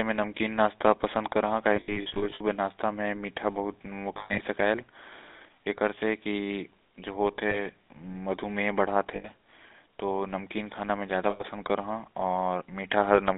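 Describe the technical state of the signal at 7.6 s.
A rough, metallic ring holds the sound from 7.50 to 7.64 s rather than moving on. These are lost GSM frames: the decoder repeated the last good frame's settings, which fits about two missing 20 ms frames.

Underneath, the GSM full-rate codec lends the speech a buzzy, gravelly roughness, with the band confined to roughly 250 Hz to 3.7 kHz. The codec rebuilds the voice from a vocal-tract model driven by sparse, regularly spaced pulses, which fits a 13 kbps stream.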